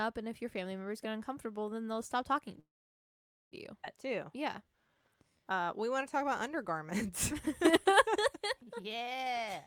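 A speech clip with four timing faults. From 2.59 to 3.55 s there is a call audio freeze: the sound stops for about 0.9 s, nearly all of it silent, then resumes where it left off. Delayed packets likely emptied the jitter buffer. At 3.82 to 3.86 s playback does a skip ahead. Roughly 0.7 s of speech is dropped, and the two sides are joined almost directly. From 4.12 to 9.38 s a jitter buffer slow-down runs the speech at 94% speed with unchanged pitch. Repeated pitch periods add 343 ms, which draws sounds out. From 9.49 s to the end, a jitter buffer speed-up plays at 177% speed. About 150 ms is cut out, and the speech sounds hurried.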